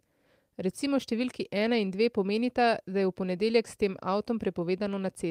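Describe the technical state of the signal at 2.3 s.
At 2.3 s the speech signal is intact, with no dropout, distortion, glitch or other technical fault audible at that point.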